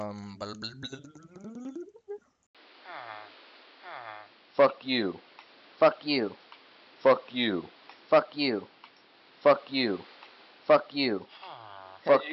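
At 2.47 s the audio drops out for 80 ms, then continues duller and boxier, with nothing above 5.5 kHz, a level shift of roughly 5 dB and new background noise about 30 dB below the signal until the end. The input was likely switched to a poorer device.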